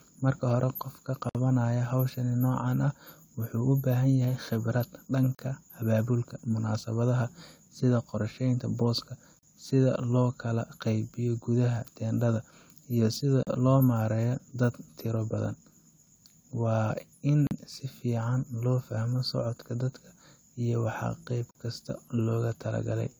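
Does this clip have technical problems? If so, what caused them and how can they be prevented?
Yes. The speech has gaps at joins of encoded pieces, recurring every 4.0 s: a 56 ms silence at 1.29 s right after "hore qofka," then 40 ms dropouts at 5.35, 9.39, 13.43 (between "gudaha teendhada iyo sida" and "loo maareeyo dad tiro"), 17.47 (just before "si fiican loo fahmo") and 21.51 s. Each 4-second segment was encoded separately, so encoder start delay and end-of-frame padding remain as holes before the speech resumes. Prevent this by encoding the whole recording in one pass, or by trimming encoder delay and padding before joining segments gaplessly.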